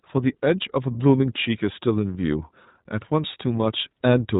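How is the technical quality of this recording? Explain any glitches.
The technical quality is limited by iLBC codec coding throughout. The band stops near 3.8 kHz, so the speech sounds narrow and muffled. Each short block's excitation is coded independently, which fits 20 ms frames at 15.2 kbps, and this leaves a plainly audible rough, slightly synthetic texture.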